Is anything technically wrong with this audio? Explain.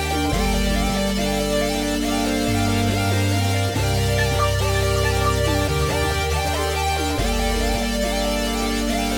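Yes. A doubled audio track runs throughout: a full-band copy trails about half a second behind, roughly 5 dB quieter, likely from a second, slower capture path. The waveform shows each onset repeated at that fixed offset, with no decay or reverberant smear.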